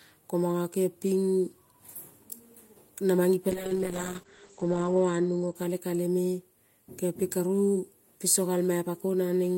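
At 3.5 s the speech goes muffled and watery, and it stays that way until about 6.11 s. That's a call bitrate drop. The call's bandwidth estimate fell, so the encoder had to squeeze the audio into far fewer bits. The sound suggests a fall from around 32 kbps to about 9 kbps, bottoming out for roughly 1.3 s. The top end is cut from 20 kHz to 8 kHz, which is why everything loses its air and gets that coarse, smeared edge.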